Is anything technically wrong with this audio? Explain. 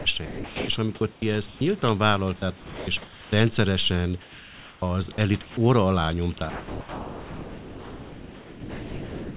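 Yes. Likely voice-detector behaviour in the call chain cuts sound out repeatedly and replaces it with synthetic noise.

Sound chopped by the voice detector occurs at 0.00–0.68 s (ending just before "és amikor"), 1.13–1.61 s (just after "és amikor"), 2.57–3.32 s, and 5.12–5.57 s (just before "óra alá"). The detector likely flipped between sending and muting, so stretches of about 0.2 to 0.6 s become comfort noise and the speech sounds choppy.

Comfort noise in place of the background runs from 4.22 to 4.82 s. The sender likely stopped transmitting during the pause, and the receiver substituted flat generated noise about 6 dB quieter than the real background.

Onset clipped by the voice detector occurs at 4.77–4.82 s. The detector was likely slow to reopen, so the first 50 ms of the returning speech are missing and it starts abruptly.

Sound dropped by the voice detector covers 6.50 s to the end of the clip. 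The detector likely mistook the remaining speech for background and stopped sending, so about 1.9 s of speech becomes steady noise. Throughout the clip, the narrowband call path leaves nothing above 4 kHz.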